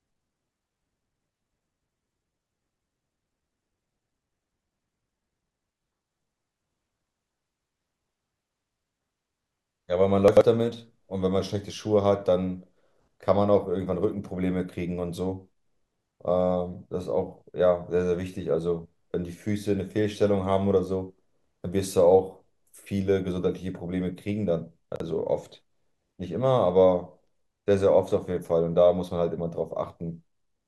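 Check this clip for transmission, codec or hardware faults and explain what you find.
There's one kind of fault, chunks out of order, turning up twice: from 10.28 to 10.41 s, and again from 24.92 to 25.00 s. A 43 ms chunk landed late, two chunks behind the first time and one behind the second, so the audio briefly plays jumbled, with hard joins where the order breaks.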